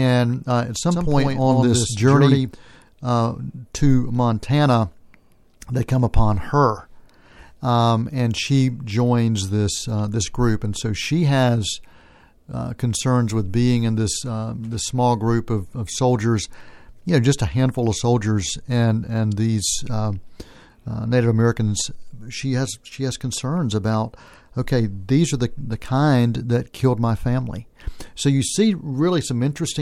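Speech, with a doubled audio track from 0.91 to 2.51 s, between "uh at" and "uh to". A full-band copy about 5 dB quieter trails by roughly a tenth of a second. Unlike an echo, it has no decay and starts and stops abruptly. This is likely a second, slower capture path.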